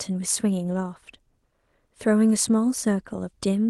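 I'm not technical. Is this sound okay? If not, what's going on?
Yes, nothing stood out as a problem when listening to this speech clip, which sounds like it came through an ordinary internet call.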